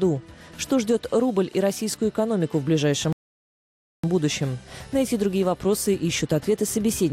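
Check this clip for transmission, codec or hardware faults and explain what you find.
One fault is present. A playback stall runs from 3.13 s to 4.04 s. The player most likely starved of data or had its thread blocked, so output dropped out. The sound cuts off mid-flow into about 0.91 s of silence before resuming.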